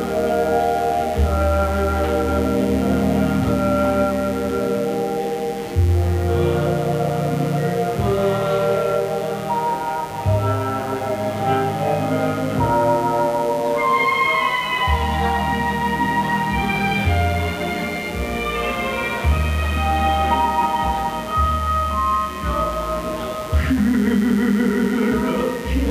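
A steady, raspy buzz sits under the audio for its whole length, at roughly 20 dB below the programme. This is mains buzz on a 60 Hz supply: sharp switching spikes from a dimmer, rectifier or unshielded cable, twice per cycle, spreading harmonics into the kilohertz range.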